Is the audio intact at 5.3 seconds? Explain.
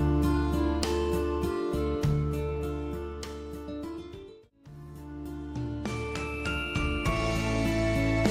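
Yes, at 5.3 seconds the audio plays through cleanly, with no dropout, click, distortion or other fault to be heard at that point.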